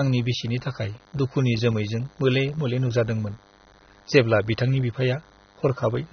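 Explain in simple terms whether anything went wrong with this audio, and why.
DECT cordless phone buzz runs through the whole clip: a nearby cordless phone's radio pulses a hundred times a second, leaking into the electronics as a thin, steady 100 Hz buzz beneath the speech.

AAC compression damage is plainly audible from start to finish: nothing remains above about 6.3 kHz, so the speech sounds dull and smeared, likely from squeezing the file too small.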